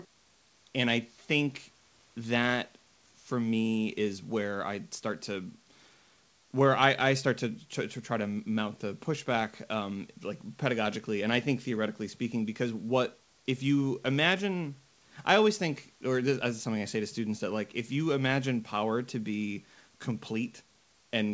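No faults in the speech: the call path is band-limited with nothing above 8 kHz, consistent with G.722 at 64 kbps, and the room noise sits about 41 dB below the speech.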